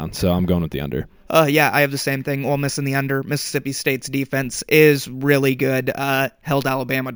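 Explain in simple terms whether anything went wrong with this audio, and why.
A thin, metallic fizz rides along with the speech for the whole clip, growing louder and softer with it. This is imaging from sample-and-hold upsampling: each sample was simply repeated without smoothing, which fits raising 16 kHz audio to 48 kHz, leaving false high copies from 8 to 16 kHz.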